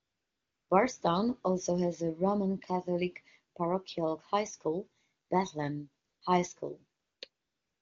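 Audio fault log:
0.00–0.69 s, 5.25–5.29 s, 6.05–6.21 s, 7.01–7.21 s and 7.29–7.82 s: AMR comfort noise. Each pause loses its real background. A steady, smooth synthetic hiss takes its place. The pauses last 694 ms, 40 ms, 160 ms, 200 ms and 526 ms. The sending phone judged the talker silent and stopped sending speech frames. The receiver then built noise from a rough level and spectrum estimate, so the background switches audibly at each edge.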